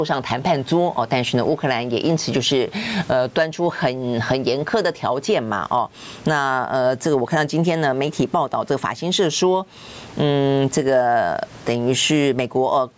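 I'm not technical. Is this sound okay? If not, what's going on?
No. The fault here is gain pumping, and it runs through the whole clip. The likely cause is a microphone level set far too high, with an automatic level control yanking the volume down every time the speech gets loud. There is faint room noise in the background, and the level control swings the volume by a large amount. Loud and quiet moments end up squeezed to a similar level, so the speech sounds flattened.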